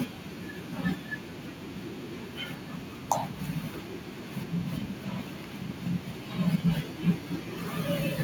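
From 3.93 s right through to 8.11 s there's a train of clicks riding over the speech: sharp, near-identical ticks at a steady 6.7 per second, about thirty of them in all, and they hit roughly as loud as the talker, so they're hard to miss, even in the pauses. That regular, same-shaped pulse is most likely electrical interference from nearby gear or a faulty connection or power supply.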